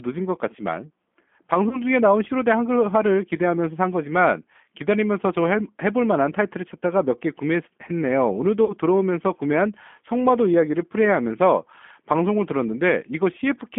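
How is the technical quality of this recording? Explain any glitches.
The speech carries audible codec damage throughout and two brief dropouts that the decoder papers over.

G.729 codec, across the whole clip: the speech is rebuilt from a vocal tract model, a pitch predictor and a handful of pulses per frame rather than sent as a waveform. The sound is consistent with an 8 kbit/s G.729A stream. The band sits between 200 Hz and 3.4 kHz, which makes the speech thin and muffled, and the sparse pulse excitation adds a rough, slightly synthetic grain that is plainly audible.

VoIP packet loss concealed by the speech codec, from 1.69 to 1.81 s and from 8.65 to 8.74 s: audio went missing, about 20 ms at the first point and about 40 ms at the second, which fits one lost packet and then two. The decoder filled each gap by extending its last pitch and filter settings at falling gain, producing a short stretched sound that fades. 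Because each frame builds on the one before, the damage lingers briefly after the real audio resumes.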